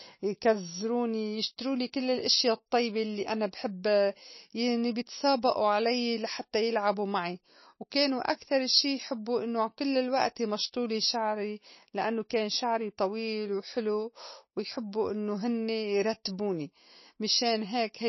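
Throughout the speech, nothing survives above 5.8 kHz, and the remaining sound is watery and swirly, with chirpy sibilants, which points to a very low bitrate. This is MP3 compression, likely: on a spectrogram, a hard ceiling at 5.8 kHz, with weak bands flickering between frames.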